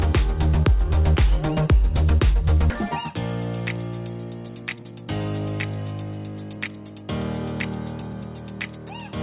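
At 2.70 s a queued stretch of roughly 0.7 s was dropped and playback went on from later audio: a skip ahead, the sound jumping forward with no gap. From 4.48 to 5.06 s, then 6.56 to 7.04 s, jitter buffer speed-up trimmed short pitch-period pieces (about 150 ms, then about 70 ms), running the sound 23% and 12% faster at unchanged pitch, noticeably hurried. Throughout, nothing reaches above 4 kHz, which fits a narrowband call codec such as G.711.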